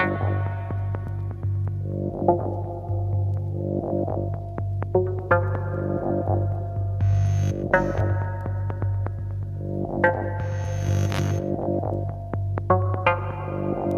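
Nothing stood out on listening.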